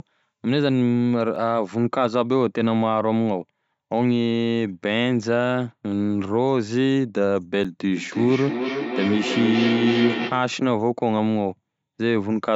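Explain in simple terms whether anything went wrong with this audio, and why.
Two things went wrong in this speech recording.

Block of digital silence: twice, the sound briefly cut out, so a tiny stretch was filled with nothing. Each gap lasts only milliseconds, at 1.36 s and 7.64 s, and the abrupt cut out and back in makes a small tick.

Feedback howl: from 7.96 s to 10.59 s, two devices in the same room were on the same call, so sound kept circling from loudspeaker to microphone and growing stronger. It becomes a low hum, around 200 Hz, with the sound going round the loop roughly every third of a second.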